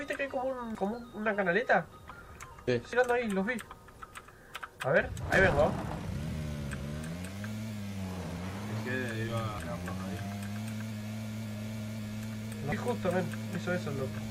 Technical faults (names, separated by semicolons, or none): damaged data in a compressed stream